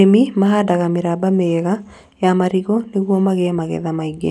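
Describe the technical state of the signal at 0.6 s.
At 0.6 s the signal is intact, with no dropout, distortion or other technical fault audible in the speech at that moment.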